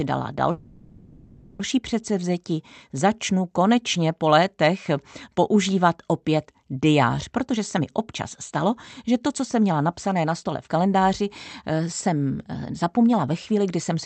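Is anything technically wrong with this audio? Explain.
Yes, the speech has two kinds of fault.

From 0.51 to 1.60 s there is a call audio freeze, likely from packets held up so the jitter buffer ran dry. For about 1.08 s the last sound is stretched into a fading buzz that never reaches silence. On a spectrogram this shows as flat, smeared bands. The speech then resumes intact, just later.

Jitter buffer speed-up runs from 7.30 to 11.22 s, right after "létech používat opět diář", at 108% speed with roughly 0.3 s trimmed. It returns from 11.71 to 13.91 s at 106%, with roughly 0.15 s removed. The receiver cut short pitch-period slices to shrink excess delay, so the speech sounds hurried at unchanged pitch. Harmonic spacing stays the same on a spectrogram while the syllables compress, with tiny splice points in the waveform. Throughout, the call codec's content stops near 8 kHz.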